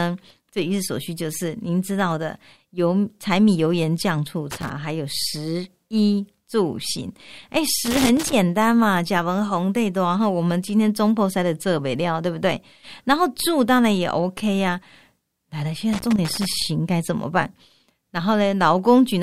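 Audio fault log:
4.51–4.70 s, 7.85–8.33 s and 15.93–16.46 s: loose connector crackle. Three short, ragged bursts of scratchy crackle cut into the speech, the first under a fifth of a second and the other two about half a second each. It sounds like a worn or dirty contact somewhere in the cable run shifting and rapidly making and breaking, so the signal gets chopped on and off in an irregular pattern.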